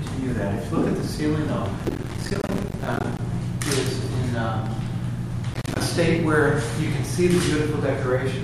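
The processor fell behind its audio deadlines twice, dropping many short buffers in a row, which points to buffers of around 5 ms. Each miss left a brief silent gap, so processor overload crackle tears through the audio from 1.79 to 3.19 s and again from 5.53 to 5.81 s.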